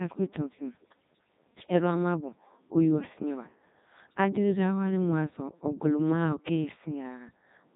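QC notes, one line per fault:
Throughout: Codec 2 vocoder. Heavily damaged, robotic, buzzy speech is resynthesised from sine waves that carry only pitch, voicing, energy and a spectral envelope, so the original waveform is lost. Nothing remains above 3.8 kHz, which fits the 3.2 kbit/s mode.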